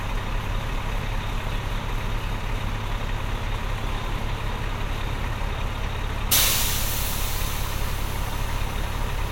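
No technical faults can be heard anywhere in these everyday sounds.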